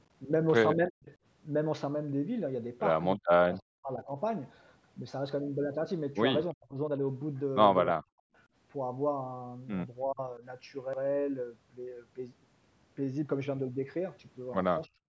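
Speech suppressed in double talk, likely, ducks the talker at 0.89, 3.16 (longest, under a second), 6.52, 7.93, 10.07, 10.39 and 14.87 s, mostly deep cuts, lighter dips around 10 s.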